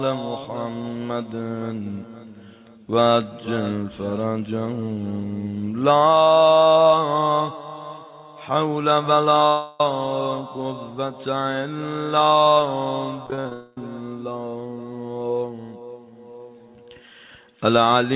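At 9.47 s the sound stops moving forward and the last moment is drawn out into a fading buzz until 9.80 s. Play resumes with about a third of a second missing and no fully silent stretch. This is a long network dropout, likely a burst of lost packets on the call path. The receiver filled the whole 0.33 s hole by extending the last audio rather than leaving silence.

From 13.26 s to 13.52 s the sound turns choppy, breaking up six times in quick succession. This is repeated packet loss with a robotic sound. Each short hole, the longest about 47 ms, is patched by continuing what came before. The patches cover roughly half of this quarter-second stretch.

Straight after, at 13.53 s, a second long network dropout begins. It smears the sound into a buzz until 13.78 s and takes about 0.24 s out of the clip. Throughout, the telephone-band G.711 codec leaves nothing above 4 kHz.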